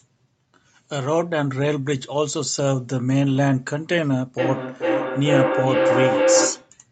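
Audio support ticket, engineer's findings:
Feedback howl, 4.38 to 6.79 s. Two devices on the same call, each mic-to-speaker trip adding gain. Tone around 500 Hz, pulsing roughly every 0.4 s, peaking about 3 dB above speech. Spectrogram: single bright horizontal band. Waveform: swelling, throbbing envelope.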